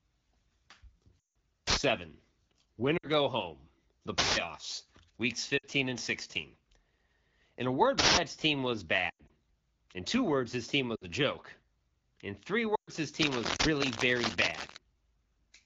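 Lost AMR speech frames first appear at 1.20 to 1.36 s. About 160 ms of speech, consistent with eight 20 ms frames, failed on the radio link. The decoder stretched the last good pitch and vocal tract settings while fading the gain, so the speech quickly sinks toward silence before recovering weak and rough.

An uninitialised buffer follows at 1.67 to 1.77 s. A block of about 93 ms, which fits a 4096-sample buffer, was played before any audio had been written into it. Leftover memory was read as samples, producing a harsh burst of loud digital noise.

Frame loss returns at 2.97 to 3.08 s, just before "go home". This time about 60 ms is lost, and the speech briefly drops toward silence.

A longer uninitialised-buffer burst hits at 4.18 to 4.37 s. It lasts about 186 ms, which suggests an 8192-sample block of stale memory.

Further lost-frame gaps of about 60 ms each occur at 5.57 to 5.66 s and at 10.96 to 11.05 s. 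The second of these falls between "two words his team" and "a joke".

Another 186 ms buffer burst sounds at 7.99 to 8.17 s.

At 9.09 to 9.31 s, just after "team was", lost frames are scattered across about 200 ms, with the longest run lasting 100 ms. This gives repeated dips and warbles in the speech.

At 12.75 to 12.90 s, about 120 ms is concealed and the speech drops toward silence.

Cable scratch noise runs from 13.21 to 14.77 s. It is dense, uneven rustling almost as loud as the speech, likely from a worn cable or connector being moved. Over that scratching, at 13.56 to 13.65 s, a 93 ms uninitialised-buffer burst erupts as one more blast of digital noise.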